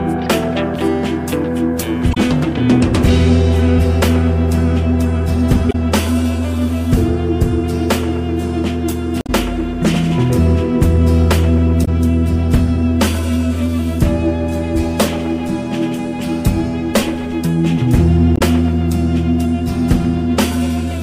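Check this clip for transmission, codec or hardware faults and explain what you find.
There's one problem here, repeated five times: damaged data in the compressed stream. Short glitches land at 2.10–2.17 s, 5.68–5.75 s, 9.18–9.30 s, 11.81–11.88 s and 18.34–18.41 s, each around 70 ms, with the third closer to 110 ms. Corrupted bytes throw the decoder off, so it garbles those frames and hunts for the next valid header, leaving a brief disruption each time.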